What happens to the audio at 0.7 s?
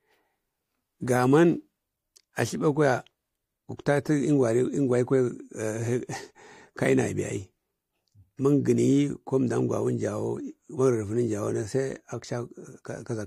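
Nothing goes wrong at 0.7 s; the speech there plays through cleanly, with no dropout, click, distortion or other fault.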